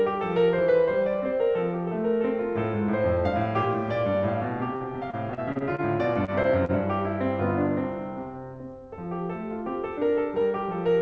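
From 4.76 to 6.71 s the music breaks up with repeated packet loss (robotic sound). About ten short holes, the longest around 46 ms, are each patched by extending the preceding sound. They recur in quick succession, so the stretch turns choppy, with pieces missing, rather than showing one isolated blip.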